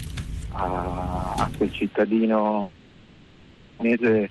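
The audio passes through an Opus call path with a 12 kHz audio bandwidth, and from 2.61 s to 3.83 s it has a long network dropout. The receiver stretches the last sound into a fading buzz or hiss for about 1.2 s, never falling fully silent, and when the audio resumes about 0.7 s of material is missing. The likely cause is a burst of delayed or lost packets that pushed the delay up by roughly half a second. From 3.85 s to 4.28 s a jitter buffer speed-up follows as the receiver drains that excess delay. It trims short pitch-period pieces repeatedly, so the audio runs at about 135% speed with unchanged pitch and sounds rushed, removing roughly 150 ms in total.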